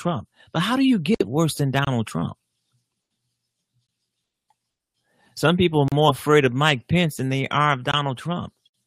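Segment timestamps fail to line up, so the player pads each boundary with silence: a gap between stream segments at 1.85–1.87, 3.87, 5.88–5.92 and 7.92–7.94 s, recurring every 2 s. Each hard-edged hole briefly cuts the speech, though none of it is lost.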